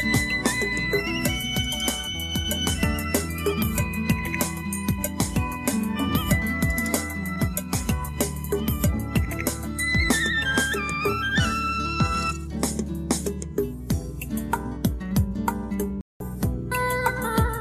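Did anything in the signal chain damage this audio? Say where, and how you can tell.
Yes, a digital broadcast dropout in the reception stage. The sound cuts out at 16.01 s and comes back at 16.21 s, a clean hole of about 192 ms, which fits a handful of corrupt frames being muted by the receiver. Whatever was sent during the gap is simply gone.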